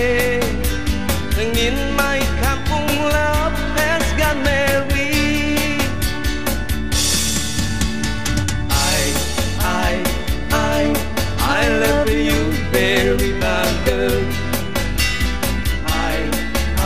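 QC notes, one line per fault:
throughout, MP2 compression: dull, gurgling, granular sound as upper sub-bands flicker off and survivors are coarsely quantised, likely Layer II coding at a starved rate, fitting about 80 kbps. Unlike a fixed low-pass, the missing treble comes and goes.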